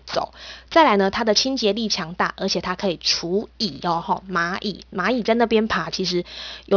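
The audio was downsampled without an anti-aliasing filter, and the sound fits a drop from 44.1 kHz to about 11 kHz. Everything above the new 5.5 kHz limit folded back down into the audible band at unrelated frequencies instead of being removed. Throughout the clip this aliasing puts a gritty, metallic sheen on sibilants and fricatives, with the folded energy only roughly 10 dB below the speech itself and the spectrum running hard up to the 5.5 kHz edge.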